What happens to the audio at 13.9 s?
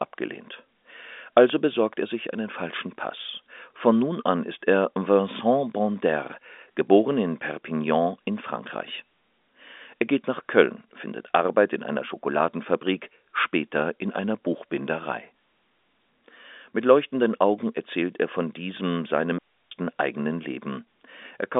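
Nothing goes wrong at 13.9 s: the speech continues intact, heard through the narrow telephone band of G.711 telephone coding, with nothing above about 3.7 kHz.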